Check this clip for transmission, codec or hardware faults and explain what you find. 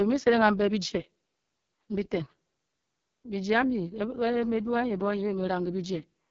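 One fault runs through the whole clip. AMR wideband (HD Voice) codec, throughout: speech rebuilt from pulses through a vocal-tract model, nothing above 7.3 kHz. The heavy raspiness points to the lowest 6.6 kbit/s rate.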